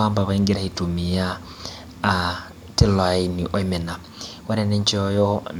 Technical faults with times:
none

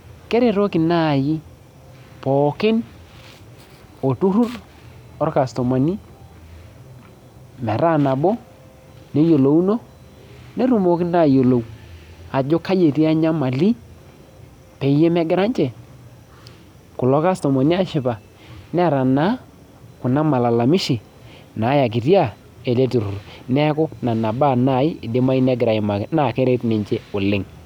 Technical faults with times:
none

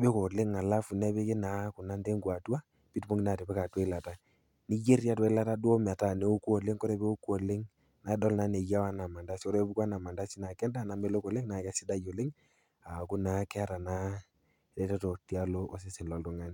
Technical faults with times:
none

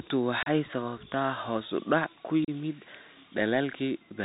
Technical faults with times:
0.00-4.24 Bluetooth CVSD headset codec
0.43-0.48 unconcealed Bluetooth headset packet loss
2.44-2.50 unconcealed Bluetooth headset packet loss

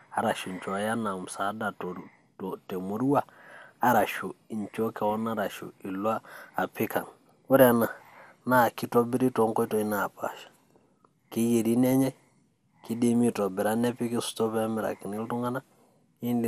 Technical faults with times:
0.00-16.47 MP2 compression

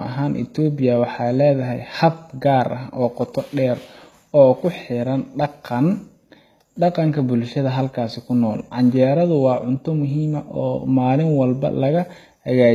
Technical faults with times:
0.00-12.75 HE-AAC compression

